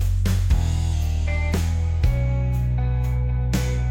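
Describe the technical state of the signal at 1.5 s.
At 1.5 s the sound is slowed and pitched down. This is a drift correction step, from 0.93 to 1.53 s. Playback runs about 5.4% slow, roughly a semitone flat, then snaps back. A clock-matching buffer likely caused it.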